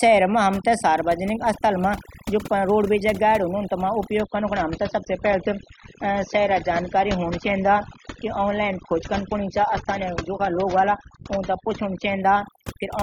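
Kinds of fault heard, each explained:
Overdone noise removal: noise reduction pushed too hard, so the background drops and breaks up into twinkling specks.
Adaptive stream at a lower bitrate: from 4.2 to 12.2 s the quality drops abruptly without a gap, treble disappears above 7.5 kHz, and codec artefacts increase.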